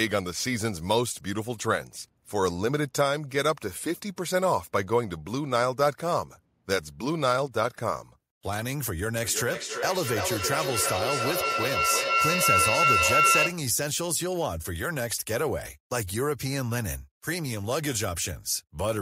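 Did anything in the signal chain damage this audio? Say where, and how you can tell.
Yes. From 9.24 s to 13.65 s there is feedback howl, arising in the call's acoustic path: a microphone picks up a nearby loudspeaker carrying the same call, and each trip around that loop adds level. Unlike ordinary echo, whose repeats fade, these repeats grow and narrow into a tone near 1.5 kHz, pulsing roughly every third of a second, the loop's delay. It peaks about 5 dB above the speech before the loop breaks.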